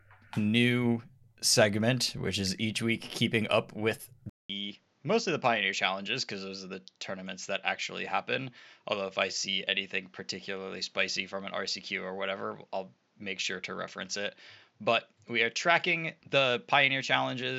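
Speech clip, and right after "week keeping up with", at about 4.3 s, there's a 200 ms gap and then everything changes: the top end is gone, with nothing above 7.6 kHz, the level drops by roughly 5 dB, and a faint new noise floor appears, around 40 dB under the voice. That holds to the end. It sounds like an input switched to a poorer device, likely a different mic or a headset profile taking over mid-recording.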